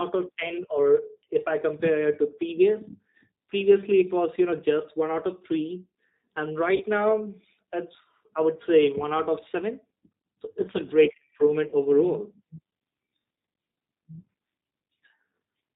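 From start to finish the speech is carried through a G.729 codec, and the damage is plainly audible: nothing survives above 4 kHz, and the voice has the rough, slightly synthetic texture of a coder that rebuilds each 10 ms frame from a vocal tract filter, a pitch predictor and a handful of pulses. The thinness and graininess point to a low-rate coder running at around 8 kbit/s, consistent with the G.729A variant.

At 6.76 s, VoIP packet loss concealed by the speech codec cuts in for about 0.07 s. Roughly 40 ms of signal is missing, which fits two lost packets. The decoder fills the gap by repeating its last pitch and filter settings at a falling gain, so the sound smears into a short stretch that fades. At 11.68 s, right after "so it's a great", the same 40 ms concealment repeats over the same span, and the voice stays weak or distorted for a moment after real frames resume.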